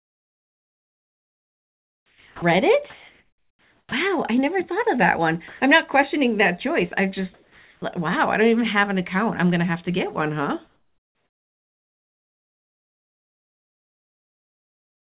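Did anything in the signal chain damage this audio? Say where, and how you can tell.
Yes. In call processing, the pauses at 0 to 2.42 s, 2.9 to 3.92 s and 7.34 to 7.82 s turn into flat, featureless hiss, about 6, 1 and 5 dB quieter, likely comfort noise in place of the background.

Speech onsets at 2.34, 3.87 and 7.80 s snap in hard, missing roughly 80, 50 and 20 ms: onset clipped by the voice detector, likely too slow to reopen.

At 5.48 to 5.6 s, about 70 ms of speech gives way to steady noise, likely sound dropped by the voice detector mistaking it for background.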